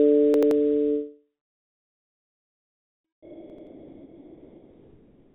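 From 0.34 to 0.51 s there is a repeated buffer. New audio did not reach the output in time, so the device replayed its last block twice more. Each block is about 85 ms, which fits a 4096-sample buffer, so one short slice is heard three times in a row with a hard edge at each join. The result is a short stutter, and roughly 150 ms of the real sound is skipped.

From 3.05 s to the end at 5.34 s, the sound gives way to steady, featureless comfort noise for about 2.3 s. The likely cause is the sender's voice detector treating this part of the sound as background and stopping transmission, so the receiver filled the gap with generated noise. About 1.3 s of actual sound is lost in that stretch. Because the sound is band-limited by the call codec, it has no content above 4 kHz, and the comfort noise carries no detail either.

Inside that gap, from 3.50 to 3.67 s, a second repeated buffer occurs with the same pattern. 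An 85 ms block plays three times with hard joins, giving another brief stutter and losing roughly 150 ms of audio.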